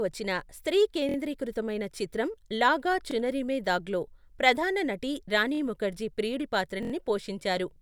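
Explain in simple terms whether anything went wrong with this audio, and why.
Something did go wrong: four brief stutters caused by a repeated buffer. New audio arrived late, so the player replayed its last tiny slice, about 23 ms long. It happens at 1.09, 3.11, 5.55 and 6.83 seconds. Nothing is skipped. A piece just repeats.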